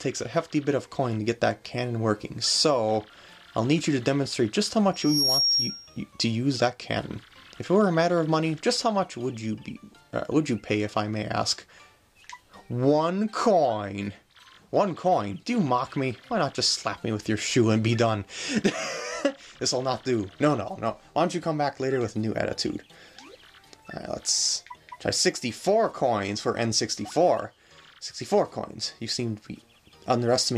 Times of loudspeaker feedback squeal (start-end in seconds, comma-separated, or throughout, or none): 4.93-6.03